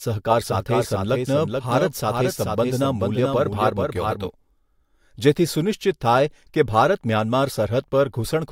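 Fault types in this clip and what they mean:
Doubled audio track: a full-band copy about 5 dB quieter trails about 400 ms behind, likely via a slower second path; the spectrogram repeats each pattern, starting and stopping abruptly.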